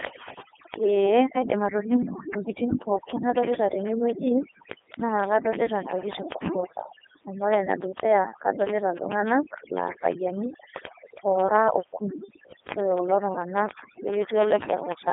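The speech runs through overdone noise removal from start to finish. The background drops and breaks up into twinkling specks, and quieter parts of the voice drop out with it. Ordinary band-limiting or low bitrate wouldn't do this: the fault comes from individual frequency bands being gated off wherever they sit close to the estimated noise floor. Layered on top is the Codec 2 vocoder, which sets this apart from a lossy waveform codec. The voice is rebuilt from pitch, voicing and envelope alone, so it sounds robotic and buzzy rather than smeared. The heavy synthesis damage fits the 3.2 kbit/s mode, within a 250 Hz to 3.5 kHz line band and with nothing above 3.6 kHz.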